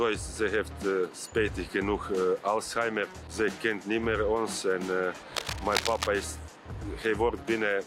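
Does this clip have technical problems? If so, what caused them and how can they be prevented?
Yes. Cable scratch noise appears from about 5.35 to 6.08 s. The likely cause is a worn cable, connector or control being moved, so the contact resistance jumps about rapidly and feeds ragged, irregular bursts of noise into the signal path. For those three-quarters of a second the result is a dense scratching, rustling layer sitting only a few decibels below the sound itself. Replacing or cleaning suspect cables and connectors, and keeping leads secured so they aren't handled during recording, would prevent it.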